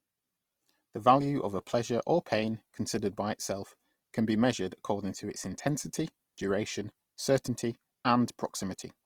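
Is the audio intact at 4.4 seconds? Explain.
No. At 4.4 seconds the speech sounds rough and grainy, a damage that runs through the whole clip. The likely cause is Opus compression in its music mode. Short of bits, it fills bands with folded or noise energy. That fits a low rate near 24 kbps.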